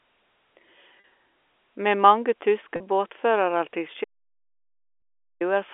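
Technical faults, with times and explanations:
1.00–1.04 s, 2.76–2.80 s, 5.00–5.02 s: packet loss with pitch repetition. Gaps of 40, 40 and 20 ms are filled by repeating the last pitch period, giving a brief held, buzzy sound.
4.04–5.41 s: audio dropout to silence. The sound cuts out for 1.36 s into silence with no room tone, likely from a lost input link, so that audio is gone.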